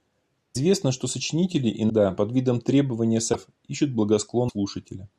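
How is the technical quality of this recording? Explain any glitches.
Four brief glitches break up the speech, at 0.54–0.57 s, 1.89–1.91 s, 3.33–3.35 s and 4.48–4.51 s. Each is the likely result of a broken MP3 bit reservoir: after missing frames, the decoder read borrowed bytes from the wrong frame. Each lasts about one frame, fitting 24 ms frames, and a spectrogram shows a narrow vertical disruption cutting across the speech harmonics, with an abrupt discontinuity in the waveform.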